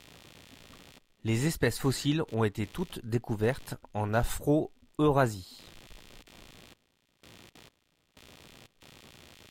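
Speech with a faint buzzing, chirping texture throughout, pulsing at around 70 Hz, roughly 30 dB below the voice: computer activity noise, from processor or graphics load shifting the audio circuit's shared ground.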